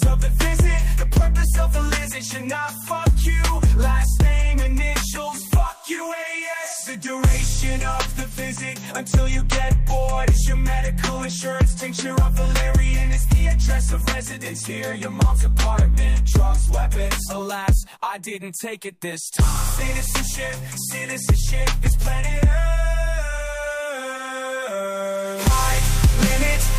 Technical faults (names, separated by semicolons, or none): none